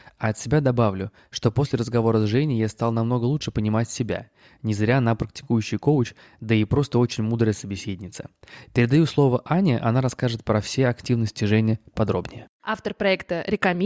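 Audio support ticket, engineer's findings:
Listened through the speech recording and nothing stood out.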